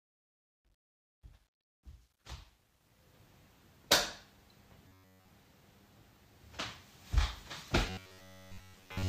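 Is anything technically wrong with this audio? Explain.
Yes. There are two kinds of fault.

From 0.0 to 3.14 s, the fade-in sounds gritty. It is worst up to about 2.07 s. This is truncation distortion on a fade: the quiet level collapses into coarse square steps, with no dither to smooth them. The coarseness fits a stage keeping about 11 bits.

From 4.88 to 5.28 s and from 7.90 to 9.08 s, the sound turns into a rigid metallic buzz at 93.8 Hz. The first stretch is entirely buzz and the second mostly so. This is robotic sound from repeated short buffers, likely caused by short chunks being replayed while real audio is skipped. The pitch fits chunks of roughly 10.7 ms.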